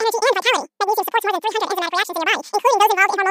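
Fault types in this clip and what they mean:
Audio read two samples at a time (double speed): the reader grabs sample pairs as single frames, so this speech runs twice as fast, an octave up.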